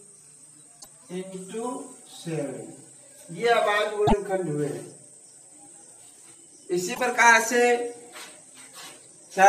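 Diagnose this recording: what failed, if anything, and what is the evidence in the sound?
Three short blips, each about 0.09 s, at 0.77–0.86 s, 4.04–4.13 s and 6.91–7.0 s, point to damaged data in a compressed stream at the codec stage. Corrupted bytes made the decoder misread frames, lose sync and hunt for the next frame header.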